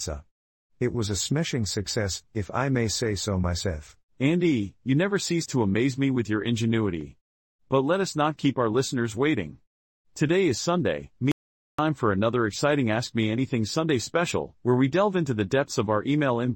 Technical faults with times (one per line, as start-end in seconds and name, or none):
11.32-11.79 audio dropout to silence